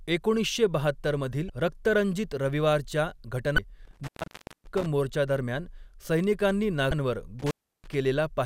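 At 1.47 to 1.50 s, corrupted bytes in the compressed speech stream make the decoder misread a frame and lose sync until it finds the next frame header. The result is damaged data in a compressed stream, heard as a 30 ms glitchy blip cutting across the speech. The same fault recurs at 3.55 to 3.58 s.

From 3.85 to 4.86 s, an intermittent contact in a loose cable or plug breaks the signal path. The speech drops out for about 570 ms, with crackle where the contact opens and closes and faint hiss in the gap.

At 6.89 to 6.92 s, another 30 ms burst of damaged data in the compressed stream produces the same brief blip.

From 7.39 to 7.94 s, the intermittent contact opens again, this time for about 330 ms. The speech cuts out with crackle at both edges.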